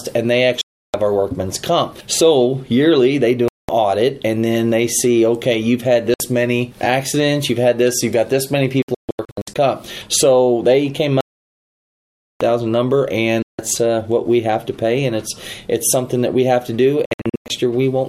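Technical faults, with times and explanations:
0.61–0.94 s, 3.48–3.69 s, 6.14–6.20 s, 8.82–9.56 s, 11.21–12.41 s, 13.42–13.59 s, 17.05–17.50 s, Bluetooth dropout: the sound cuts to silence and resumes further along, as though it had kept playing. The longest gap is about 1.2 s at 11.21 s. The 8.82 s and 17.05 s stretches break into short stutters instead of one hole, with the longest single gap 0.14 s and 0.10 s respectively. The likely cause is wireless audio packets arriving too late at the headphones and being discarded.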